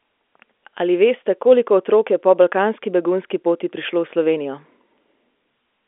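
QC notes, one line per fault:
No faults found; the speech carries the expected G.711 A-law telephone band of roughly 250 Hz to 3.5 kHz with nothing above 3.8 kHz, and its faint level-following quantisation noise stays under the signal.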